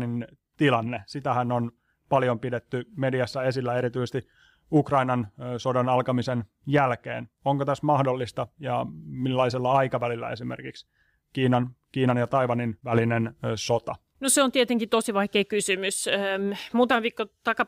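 No technical faults occur at any point in the recording, so there is nothing to describe in time order.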